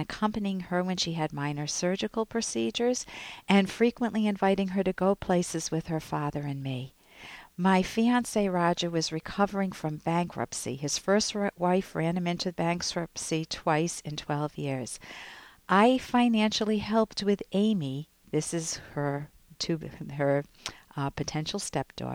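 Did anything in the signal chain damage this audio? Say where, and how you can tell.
No, nothing in the chain audibly damaged this audio, so there's no stage to point to.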